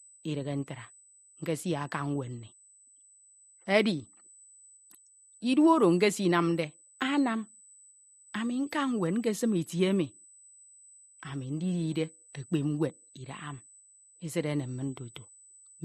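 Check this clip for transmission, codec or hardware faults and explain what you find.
A USB whine runs throughout this speech clip at 8 kHz. Current drawn by the USB bus in 125-microsecond microframes has leaked into the audio through the power or ground. It is heard as a thin, fixed-pitch tone sitting steadily behind the speech, roughly 25 dB below it.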